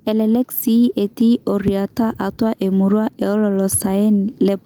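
Throughout, gain pumping swings the level by around 10 dB as loud syllables pull the gain down, squashing the dynamics. Likely the input gain is far too high and a fast limiter keeps clamping it. Unlike a noise gate, a limiter turns the level down rather than cutting it to silence.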